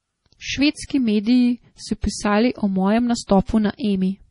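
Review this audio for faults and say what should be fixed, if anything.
MP3 compression runs through the whole recording: nothing survives above 10.6 kHz, and weak frequency lines flicker on and off between frames, giving the speech a watery, swirly texture with metallic sibilants. The heavy damage is likely from an encode near 32 kbps, too few bits for this material.

Pre-echo appears from 2.01 to 2.03 s, a short hiss spreading about 26 ms ahead of a sharp attack. The transform block spreads quantisation noise sized for the loud onset across the quiet moment before it, softening the attack.

To prevent both, keep the original uncompressed or lossless source, or re-encode at a much higher bitrate with an encoder whose block switching handles transients.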